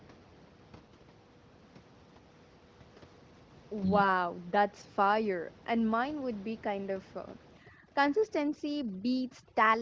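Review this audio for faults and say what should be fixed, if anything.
From 7.57 s through to the end at 9.82 s you get overdone noise removal. The reducer is pulling down any band that sits near its noise estimate, so the room noise, about 23 dB under the speech, collapses to near silence with twinkly specks, and the quieter bits of speech go too. Ease off the reduction strength so it leaves some room noise in and stops eating the speech.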